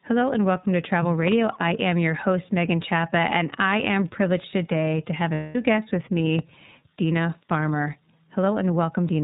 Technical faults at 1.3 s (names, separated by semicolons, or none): iLBC codec; loud pop